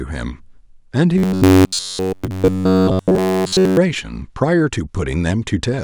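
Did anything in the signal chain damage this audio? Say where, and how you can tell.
Yes. From 1.18 s to 3.77 s the speech turns into robotic sound from repeated short buffers, with the damage likely at the driver or buffer stage. Throughout that stretch the voice becomes a rigid, metallic buzz fixed at 93.8 Hz, while still loosely tracking the words. That pitch matches a chunk of about 10.7 ms being replayed over and over. Fresh audio was arriving too slowly, so the last chunk was repeated and the real signal was dropped.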